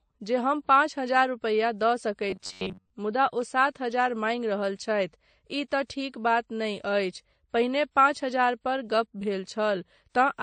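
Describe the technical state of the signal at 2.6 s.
At 2.6 s you're right in the middle of robotic sound from repeated short buffers, running from 2.30 to 2.90 s just after "पाँच हजार रुपैया दऽ". It's likely a starved buffer being looped, roughly a 10.7 ms chunk replayed for most of that stretch, which pins a rigid, metallic buzz near 93.8 Hz over the speech.

Underneath that, the whole clip carries transcoding between lossy codecs. The texture points to a low-bitrate AAC pass followed by WMA, so you hear both sets of smearing stacked together.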